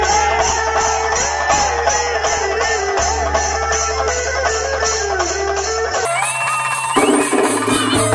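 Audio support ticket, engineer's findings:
Sound jumps high and hurried from 6.05 s to 8.15 s; everything runs 1.5 times faster and about 7 semitones higher together. Wrong sample rate at the playback or resampling stage. Samples played unconverted at the wrong clock, which fits 16 kHz material output at 24 kHz. Speed and pitch shift by the same 3:2 ratio.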